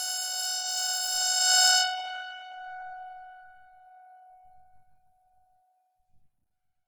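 Throughout the music, a likely cause is Opus compression in its CELT music mode at a low bitrate, which fits roughly 16 kbps. Starved bands are filled with folded or noisy content, so tones sound grainy, rough and hissy, with nothing above about 19.9 kHz.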